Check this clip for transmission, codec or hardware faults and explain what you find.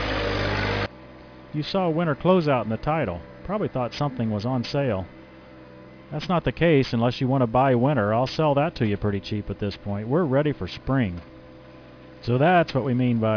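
One fault runs the full length of the clip. Aliasing, present throughout: the audio was resampled downward without an anti-alias filter, which fits a drop to 11 kHz, so content above 5.5 kHz folds back below that edge, sitting about 20 dB down as gritty, metallic, unrelated tones crowding the top of the band.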